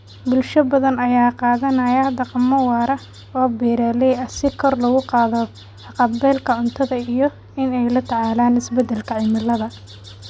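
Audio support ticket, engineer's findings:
Resampler restarted on every block, 8.8 s to end: 20 Hz ticking under speech. 48 kHz to 16 kHz converter reset per 50 ms block, edge samples wrong.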